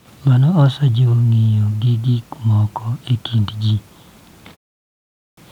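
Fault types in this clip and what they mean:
Clipped start after a pause: the output path goes idle during silence and has to wake or relock before it passes sound again. After a 0.31 s pause, speech returns at 4.79 s with its first 0.58 s missing, starting abruptly mid-sound.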